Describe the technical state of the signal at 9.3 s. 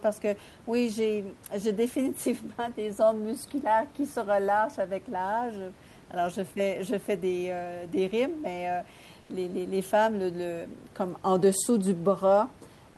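Likely discontinuous transmission: the sender's voice detector stopped sending during a pause, so the receiver filled 9.21 to 9.29 s with comfort noise in place of the background. For those 80 ms the real room noise becomes steady, featureless hiss about 4 dB quieter.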